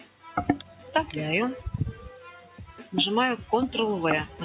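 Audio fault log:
throughout: noise suppressor applied to music or sounds. A speech-tuned suppressor stays active on non-speech material and treats sustained content as noise, so levels swing by roughly 10 dB. Onsets pass while held parts and tails sag, giving a pumping, thinned sound within the 4 kHz band of the call path.
0.00–0.28 s, 0.63–0.81 s, 2.36–2.93 s: sound cut by the noise suppressor. The suppressor classed these stretches as noise and pulled them down by about 10 dB, about 6 dB and about 8 dB respectively. Steady or decaying sound sinks or ends early while sharp attacks survive.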